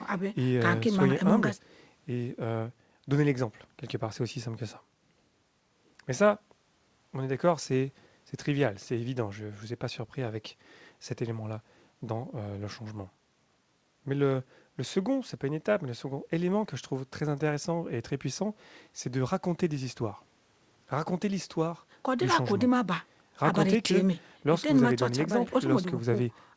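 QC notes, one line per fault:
The speech comes through a call path consistent with G.722 at 64 kbps, so its bandwidth stops at 8 kHz with nothing audible above that point, and no faults are present.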